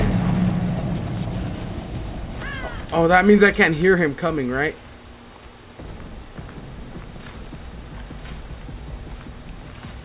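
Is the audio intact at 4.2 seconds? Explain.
Yes, the audio is intact at 4.2 s, with no dropout, glitch or distortion there.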